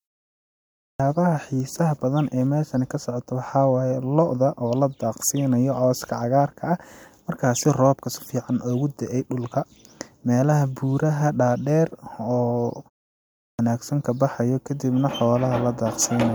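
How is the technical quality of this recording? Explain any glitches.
The recording has two clipped starts after a pause, where speech begins already underway.

At 0.66 s and 13.26 s, about 0.34 s and 0.33 s are lost before "xiisaha badan ee meeshan" and "ka baxayo kadibna". The playback device sleeps through the preceding silence and wakes late, swallowing the opening sounds. On a waveform, speech jumps straight from flat silence to full amplitude with no onset, and a spectrogram shows energy appearing abruptly across all bands.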